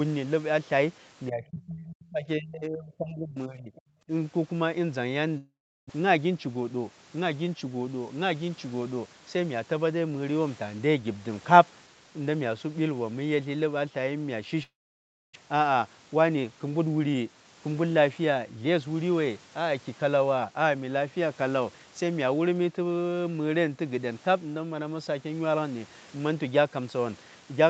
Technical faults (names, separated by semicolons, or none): speech suppressed in double talk; other side's voice leaking through; long network dropout; jitter buffer speed-up